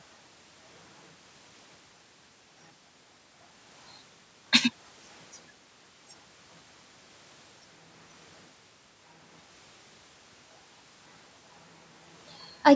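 No technical faults are present in the speech, which carries the normal signature of call microphone processing: the lowest bass is trimmed and nothing extends above 8 kHz.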